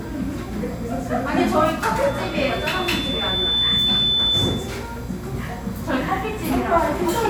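At 2.07 s a loudspeaker feedback squeal kicks in: the mic is hearing its own speaker, and around 3.5 kHz the loop gain tips past one. The tone swells over a second and a half, ends up a bit louder than the sounds themselves, and cuts at 4.83 s.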